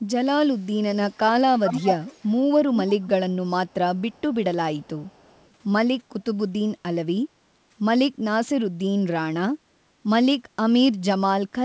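From 0.57 s to 5.51 s an echo leak returns a delayed copy of the speech, 347 ms behind the original, at 0.57–0.65, 1.10–1.18, 1.65–2.31, 2.76–3.36, 3.67–3.74, 4.12–4.35 and 4.77–5.51 s. The far end likely played the call over a loudspeaker, and its echo canceller let some of it back into the microphone. The copy's level jumps from about 40 dB below the speech to only about 5 dB below at 1.65–2.31 s, and sits near 15 dB below at 2.76–3.36 s. A fixed lag and uneven scraps mark this as echo rather than room reverberation, which would trail off smoothly.

At 9.59–9.72 s the background is gated by the echo canceller. The canceller pulled the microphone down hard while the loudspeaker played, so the room sound dips by up to about 8 dB for roughly 150 ms and then recovers. Only the background drops, and it comes back when the canceller lets go. That separates it from a packet-loss gap, which cuts everything at once. 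The 8 kHz ceiling from the G.722 call path stays constant throughout.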